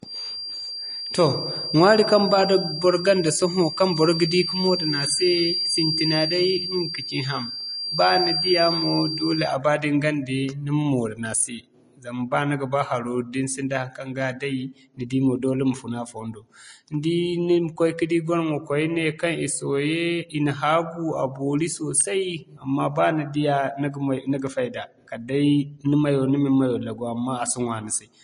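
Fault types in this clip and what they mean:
Vorbis compression: The speech has plainly audible codec damage throughout, with a grainy, hissy texture in the upper range and nothing above 10.5 kHz. The likely cause is Vorbis encoding at low quality: the coder keeps a smooth spectral envelope but quantises the fine detail on top of it so coarsely that treble detail turns into noise of similar energy, and it cuts the band off at 10.5 kHz. This behaviour fits a bitrate near 30 kbps.
Feedback whistle: A thin, steady tone at 4.7 kHz sits behind the speech from the start to 9.58 s, about 5 dB below the speech level, slowly swelling and fading rather than building into a howl. The likely cause is a loudspeaker-to-microphone loop running just short of feedback, so one frequency keeps ringing at low level. It stops at 9.58 s, and the rest of the clip carries no tone.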